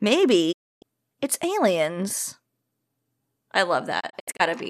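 Digital broadcast dropout: the receiver lost valid frames and muted until good ones returned. At 0.51 s the speech fades out over 20 ms into silence, coming back at 0.84 s on "it's aliens". From 3.99 to 4.41 s, several short holes, the longest 72 ms, chop the speech.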